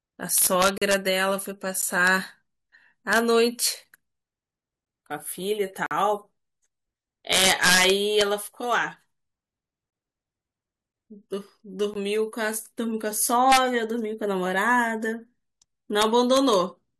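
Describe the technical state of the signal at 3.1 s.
At 3.13 to 3.18 s, integer overflow: peaks only about 1 dB over the limit wrap to the opposite sign, giving a violent crack far sharper than clipping's flattened buzz.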